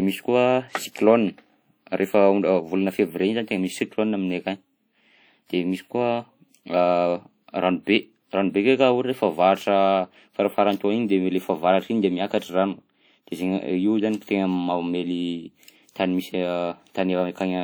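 Speech runs throughout with plainly audible codec damage, likely WMA compression: a ringing, washy texture and hiss that swells and fades with the voice, fitting a low bitrate around 48 kbps. A spectrogram would show smeared, patchy blocks with gaps and nothing above 20.1 kHz.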